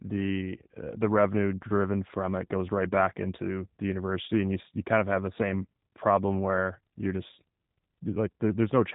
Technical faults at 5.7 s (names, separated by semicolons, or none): G.729 codec